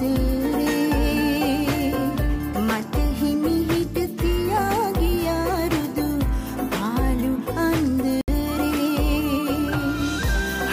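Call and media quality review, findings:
Dropout to silence, 8.21–8.28 s, 68 ms; likely Bluetooth stall, headset buffer ran dry awaiting resent packets. Spectrogram: vertical blank gap; waveform flat, then resumes.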